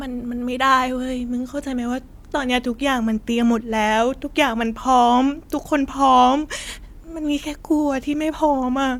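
No technical faults are audible.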